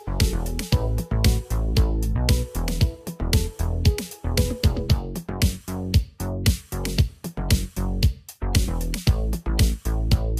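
Nothing stood out on listening to the recording.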